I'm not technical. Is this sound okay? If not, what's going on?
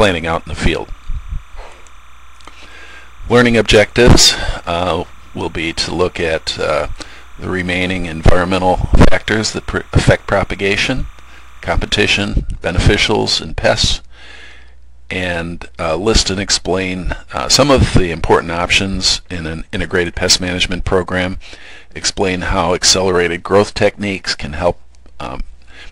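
No, not quite. From the start until about 12.07 s there's timecode bleed: a faint, steady chirpy warble flipping between two pitches around 1 and 2 kHz. It's a sync signal from a nearby cable or track leaking into the audio, and it stops after that.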